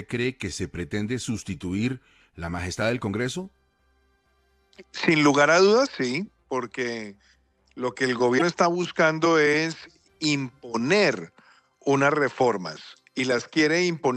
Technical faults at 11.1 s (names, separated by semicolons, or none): none